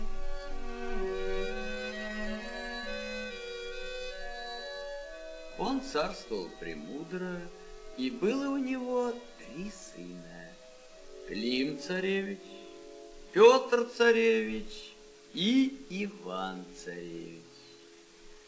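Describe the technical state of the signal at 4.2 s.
At 4.2 s the signal is intact, with no dropout, glitch or distortion, only the steady wideband character of the G.722 call path, which carries nothing above 8 kHz.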